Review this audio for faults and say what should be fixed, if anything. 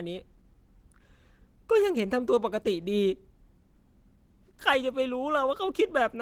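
Throughout the whole clip the speech has a plainly audible hoarse, muffled and grainy quality, the kind you get from Opus compression pushed hard. It's likely the encoder dropped into its hybrid mode, coding the lower band as speech and patching the upper range with approximated band energy, which fits a rate around 16 kbps. The top end still reaches about 20.3 kHz, so the roughness comes from the coding, not a bandwidth cut. To prevent it, encode at a higher bitrate or keep a lossless master.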